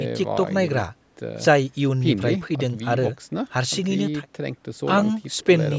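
Nothing goes wrong anywhere in this speech; it's simply been through a call's microphone processing, which trims the deepest bass and leaves nothing above 8 kHz, exactly as that kind of path normally does.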